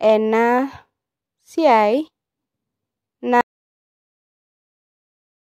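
At 3.41 s the input to the recorder was most likely lost, through a disconnected device, a failed link or an accidental mute, while writing carried on with silence. This audio dropout to silence cuts the speech off abruptly and never recovers: from 3.41 s to the end there is silence, with no room tone or background left, so whatever was said in those last 2.18 s is simply gone.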